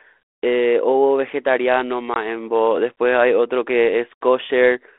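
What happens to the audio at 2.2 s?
A single packet of about 20 ms was lost on this ADPCM call, from 2.14 to 2.17 s, and the G.726 decoder's predictor and step size lost sync with the sender's. The sound drops to a hard-edged gap, then returns with brief distortion before settling.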